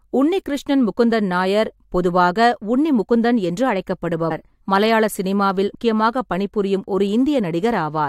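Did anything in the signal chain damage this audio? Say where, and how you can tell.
Yes: compressed frames skipped at 4.30 s and 5.74 s, at the codec stage. Speech jumps ahead about 100 ms and 150 ms, whole 23.2 ms frames.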